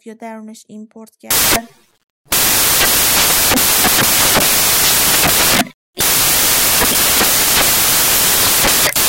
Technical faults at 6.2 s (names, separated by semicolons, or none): samples built from the wrong bytes